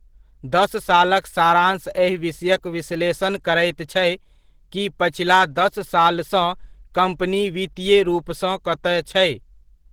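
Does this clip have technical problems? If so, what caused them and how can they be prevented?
Yes. Opus compression artefacts run through the whole speech recording. The speech has a hoarse, muffled and grainy quality, with plainly audible codec damage. This likely comes from a low-rate Opus encode, which fits a bitrate around 16 kbps in the hybrid mode, where the lower band is coded as speech and the upper band is filled coarsely. The bandwidth stays fullband, with content reaching about 20.2 kHz. Encoding at a higher bitrate, such as 32 kbps or more for speech, would prevent it.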